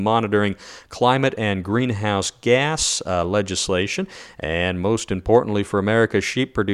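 No technical faults can be heard anywhere in the speech recording.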